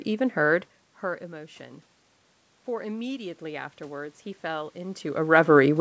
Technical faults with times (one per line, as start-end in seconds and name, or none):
2.66-5.06 automatic gain rising